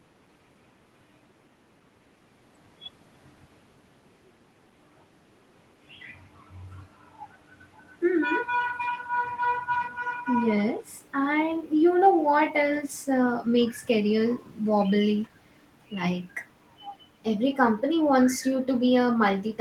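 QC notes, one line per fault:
Nothing stood out on listening to the speech as carried over the call path.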